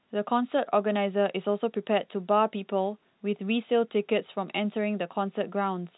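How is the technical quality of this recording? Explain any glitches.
No glitches in this recording.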